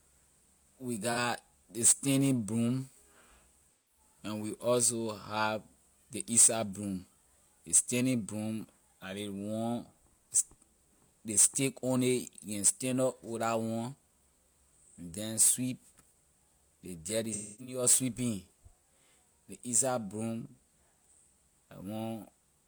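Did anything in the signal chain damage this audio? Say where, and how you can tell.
Yes, at the codec stage: AAC frame loss with concealment. There's a brief smeared blip at 1.12 s before "ley standing broom", a noisy, phasey patch from 3.72 to 4.00 s before "and we", and after "ley dirt you" a stretch from 17.31 to 17.83 s that fades down and back. The decoder is papering over missing frames with its last good spectrum.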